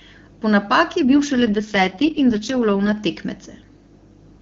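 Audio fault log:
1.04–2.97 s, AMR rate drop: after "napaki je" the speech turns rough and synthetic, with no gap or band loss, which fits a fall from 23.85 to 6.6 kbit/s.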